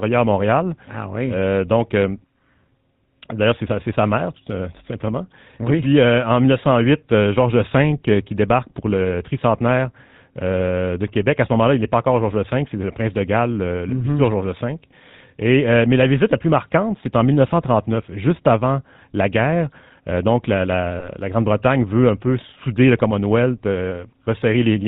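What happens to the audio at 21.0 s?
At 21.0 s there are lost GSM frames, a single 20 ms frame, running to about 21.09 s. The decoder fills the gap by repeating the last good frame's settings, giving a short, rough metallic ring. On a spectrogram the harmonics freeze into flat horizontal streaks, and the waveform shows a briefly repeating pattern.

Underneath, the GSM full-rate codec, which fits a 13 kbps bitrate, keeps its buzzy, gravelly coarseness. The spectrogram shows nothing above 4 kHz around this moment.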